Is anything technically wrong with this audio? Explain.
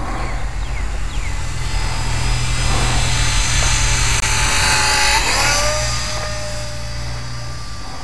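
Yes. At 4.20 to 4.24 s, likely a Bluetooth dropout: one late packet was discarded, which fits a lost frame of about 21 ms. The sound cuts to silence, then resumes as though it had played on.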